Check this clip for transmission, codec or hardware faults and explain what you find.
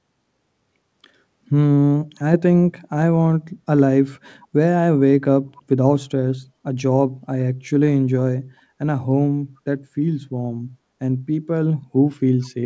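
One fault is audible, an echo leak near the very end. It runs from 12.42 to 12.46 s. A brief, very faint copy of the speech returns about 425 ms after the original. It sits far below the live speech. The likely cause is a far-end loudspeaker being picked up by its own microphone, with the echo canceller missing a scrap and sending it back. The call path's G.722 coding leaves nothing above 8 kHz.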